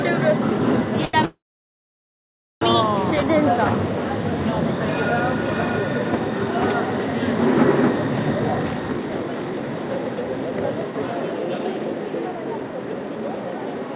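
At 1.05 s a short stall from a late packet holds the sound for about 84 ms, until 1.16 s. A packet missed its slot, the jitter buffer emptied, and the receiver stretched the last fragment instead of skipping ahead, so nothing is lost but the audio now runs 84 ms late. It sounds like a brief hang with a faint buzz or dip. On a spectrogram the band-limited content, with nothing above 4 kHz, smears into flat horizontal streaks.

From 1.25 s to 2.64 s comes a call audio freeze, likely caused by packets held up in transit while the buffer sat empty. The receiver fills about 1.36 s in all. A short continuation of the last sound decays quickly, and then roughly 1.25 s is near silence before playback resumes exactly where it stopped. The waveform shows a brief tapering tail and then a flat line. The spectrogram shows a dark gap across the whole band, and everything after it is shifted later.

From 8.38 s to the end, a jitter buffer speed-up plays the sound at about 120% speed. 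Too much audio had built up in the buffer, so the receiver repeatedly cut out tiny pitch-period-sized slices to shrink the delay, removing around a second in total. Events arrive hurried and crowded while their pitch stays put. On a spectrogram the harmonics keep their frequencies but each event is compressed in time, and the waveform shows tiny splice points scattered throughout.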